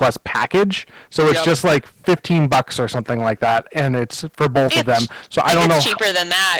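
Throughout this speech clip, hard clipping drives the signal roughly 22 dB past the level the chain can pass, so about one sample in seven is flattened at the ceiling. Unlike soft saturation's warm thickening, the result is a harsh, buzzy fuzz on every loud syllable. Opus voice compression runs across the whole clip too, and its coarse excitation coding leaves the sound hoarse and slightly robotic, which fits a bitrate around 16 kbps in hybrid mode. It is not a plain low-pass: content reaches about 20 kHz, so the damage is hoarseness rather than a narrowed band.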